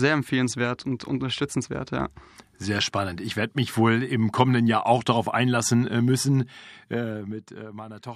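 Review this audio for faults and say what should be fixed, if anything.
Zipper noise runs from 6.55 s to 7.76 s, just after "darauf einlassen äh müssen", as the level of the speech is pulled down by roughly 15 dB. The gain moves in discrete jumps, about 30 per second, rather than as a continuous ramp, so every jump leaves a small click and the clicks stack into a ticking texture over the fade. The fix is to interpolate the gain per sample or through a short smoothing filter so the level glides between settings.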